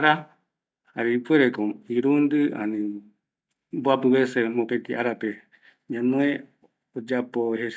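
No technical faults can be heard anywhere in the speech. There are no events to place in time and nothing to explain.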